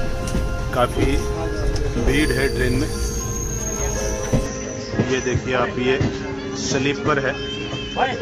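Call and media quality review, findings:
Input switched to a poorer device, 4.46 s to end. Audio abruptly narrows to nothing above 7.6 kHz, drops a few dB, gains its own noise floor, no gap at the switch. Likely capture-device change; new noise and level separate it from codec band-limiting.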